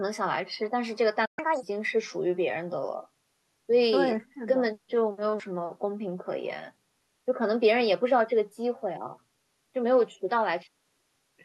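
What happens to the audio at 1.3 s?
At 1.3 s the speech is inside a playback stall: the output drops to silence from 1.25 to 1.39 s, a gap of about 120 ms, most likely because the player's buffer ran dry or its thread was held up, before the sound resumes.

Straight after, from 1.39 to 1.63 s, comes catch-up at higher speed. The player resamples the backlog at 1.5 times normal rate to recover the lost time, so the speech runs fast and sounds roughly seven semitones higher, then returns to normal pace and pitch.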